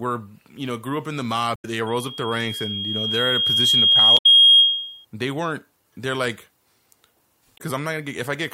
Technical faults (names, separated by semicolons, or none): damaged data in a compressed stream; loudspeaker feedback squeal